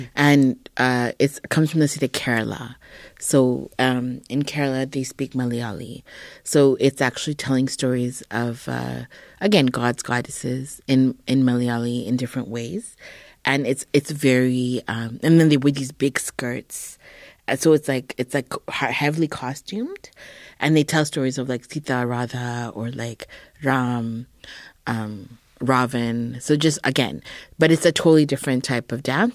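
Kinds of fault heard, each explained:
No technical fault can be heard anywhere in this speech recording, with the signal holding steady throughout.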